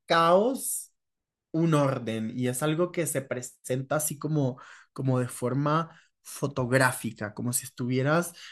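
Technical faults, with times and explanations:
No technical faults can be heard in this recording.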